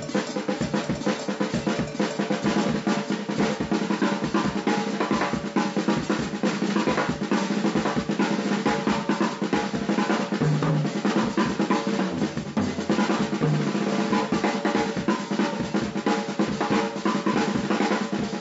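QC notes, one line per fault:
No fault to note.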